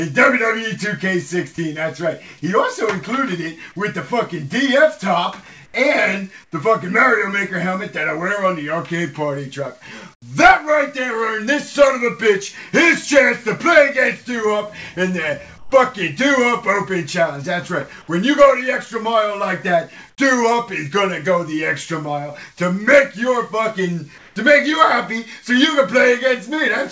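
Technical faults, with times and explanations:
5.66–5.74, 6.44–6.52, 10.14–10.22, 15.58–15.72, 20.10–20.18 and 24.18–24.36 s: comfort noise in place of the background. Short pauses of 80 to 180 ms lose their real background. A flat, featureless hiss takes its place, about 1 to 13 dB quieter. The likely cause is discontinuous transmission: the sender goes quiet and the receiver fills the gap with synthetic noise.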